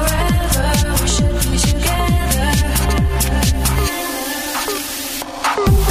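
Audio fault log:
No faults were heard anywhere in this clip.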